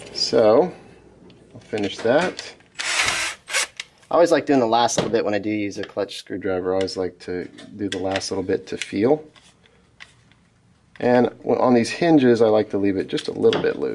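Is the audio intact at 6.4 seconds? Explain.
No. A wrong sample rate stretch from 2.98 to 6.37 s ends right there. Audio that fits 22 kHz material played at 24 kHz runs 1.09 times fast and 1.47 semitones high. On a spectrogram, the harmonics shift upward and the features compress in time.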